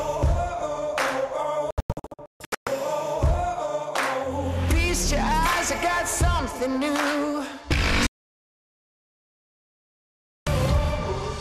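From 1.71 to 2.67 s a digital broadcast dropout punches a cluster of short holes into the sound, about 0.7 s silenced in total, the longest gap 0.14 s. At 8.07 s a second dropout mutes everything until 10.47 s, a clean 2.4 s gap. The receiver muted on failed frames. Unlike packet-loss concealment or a tape dropout, nothing is smeared, repeated or dulled. The audio simply stops dead and resumes later, with the missing stretch gone.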